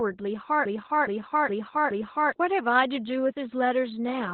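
A speech clip with two faults. Opus voice compression affects the whole recording. Nothing is heard above about 4.3 kHz, so the sound is narrowband and muffled. It is also hoarse and slightly robotic. That heavy damage fits SILK-mode coding at a very low bitrate, around 8 kbps. From 0.65 to 2.32 s there is a broken-record loop. A piece of about 0.42 s plays four times, back to back. The audio that belonged there is gone. The likely cause is a stalled player or stream resending its last fragment.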